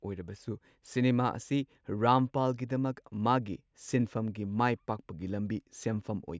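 No faults turn up anywhere in the speech recording; the signal runs uninterrupted throughout.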